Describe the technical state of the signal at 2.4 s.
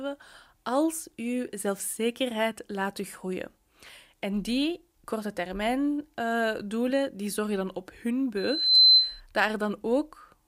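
At 2.4 s the speech signal is intact, with no fault audible at that moment.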